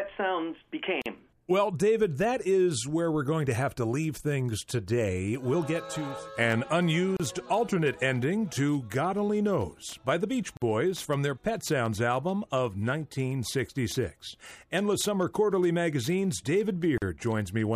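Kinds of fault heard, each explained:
Gap at a join of encoded pieces: the audio was encoded in separate sections and butted together untrimmed, so each join keeps the encoder's start-up silence and final-frame padding. Short holes of about 32 to 50 ms open at 1.02, 7.17, 10.57 and 16.98 s, with smeared edges, and the sound resumes exactly where it stopped. Unlike a dropout that loses material, nothing is skipped; silence is inserted.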